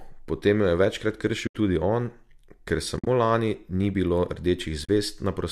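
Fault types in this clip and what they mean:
AAC frame loss with muting: bits of the stream went missing and the decoder just zeroed them, so the speech fades out and back in across the overlapping windows, leaving soft-edged holes. There are three: about 80 ms right after "potem jo je večkrat" at 1.47 s, 80 ms scattered over roughly 0.1 s before "lani ni bilo" at 2.97 s, and 40 ms at 4.85 s. Those lengths fit the 10 ms frames of what is likely low-delay AAC.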